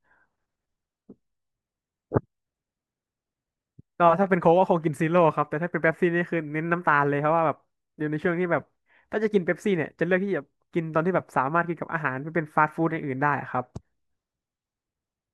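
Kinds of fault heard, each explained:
No technical fault can be heard in this speech recording; the signal comes through intact, with nothing in it that points to a problem in capture, processing or playback.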